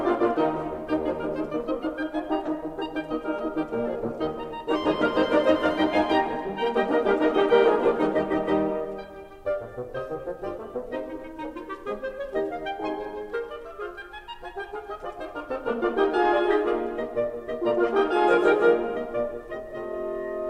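A short burst of decoding damage interrupts the music at 2.44 to 2.48 s, a corrupt frame decoded: flipped bits in a couple of compressed frames were played back rather than discarded, so misread gains and codes spray energy into the wrong frequency bands. It lasts about 40 ms and peaks around -15 dBFS. Unlike a dropout or concealed packet loss, foreign sound is added rather than the audio simply being smoothed over.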